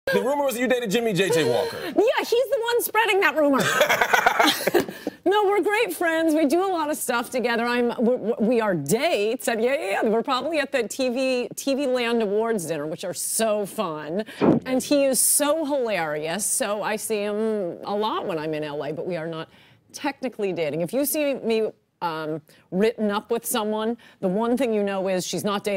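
No technical faults can be heard anywhere in the recording; the signal stays continuous and steady throughout.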